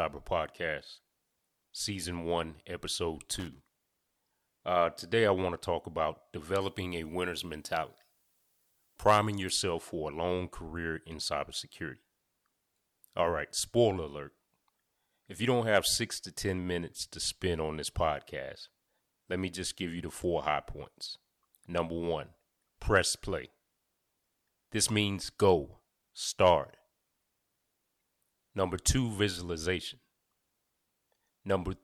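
Loose connector crackle runs from 3.33 to 3.60 s. A worn or dirty contact in the signal path is making and breaking as it shifts, so the speech is chopped into fragments for that quarter second. The result is a short, uneven burst of scratchy crackle sitting over the voice rather than a steady noise.

Pre-emphasis left on affects the stretch from 6.61 to 9.50 s, starting right after "want to talk about" and ending just before "for a long career". The treble lift applied before recording was never undone. The tilt fits the CD 50/15 µs curve, leaving 10 kHz about 8 dB hotter than 1 kHz, so the speech turns thin, glassy and hissy on sibilants.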